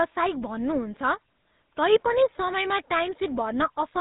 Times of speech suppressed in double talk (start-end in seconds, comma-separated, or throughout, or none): none